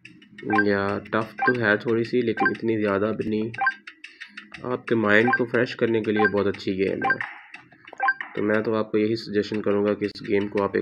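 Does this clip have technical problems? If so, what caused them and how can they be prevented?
Yes. There are skips at 1.07 s and 3.27 s where the sound jumps ahead by a few milliseconds without any silence. That's likely a dropped buffer (overrun), with the app reading too slowly and the hardware overwriting the samples. A bigger buffer or a higher-priority capture thread prevents it.

At 10.12 s there's a gap at a join of encoded pieces: a gap of about 34 ms with smeared edges, after which the sound carries on. It comes from encoder delay and final-frame padding left in when the pieces were joined. Trimming those, or encoding the whole thing in one pass, avoids it.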